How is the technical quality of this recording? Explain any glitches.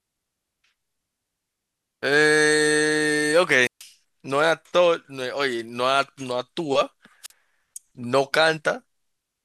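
The speech has two wireless microphone squelch dropouts. Each time the analogue FM radio link fades, and the receiver's squelch mutes the output. From 3.61 to 3.84 s, hiss rises briefly before a hole of near silence lasting about 0.14 s, after which the speech returns. The same thing happens, shorter, from 7.23 to 7.31 s, where the mute lasts about 42 ms.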